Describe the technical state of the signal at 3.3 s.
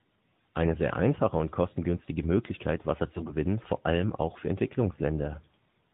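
At 3.3 s the speech turns briefly hoarse and gargly from 3.16 to 3.35 s, just before "vor allem auch für". These are AMR bit errors: flipped low-priority bits misplace the codec's excitation pulses and skew its pitch and spectrum values.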